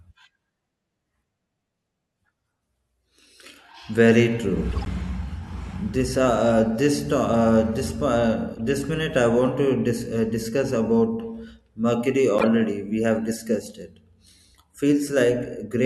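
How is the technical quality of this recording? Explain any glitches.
The recording has three short glitches, all the same kind: a corrupt frame decoded. They hit at 4.71 to 4.87 s, 8.54 to 8.59 s and 12.39 to 12.44 s. Each time, damaged bits in the compressed stream got played anyway, so misread gains and codes threw energy into the wrong frequencies for a few frames. You hear brief chirpy, noisy bursts. The first is fairly loud, the second quieter, and the third jumps out at about -5 dBFS.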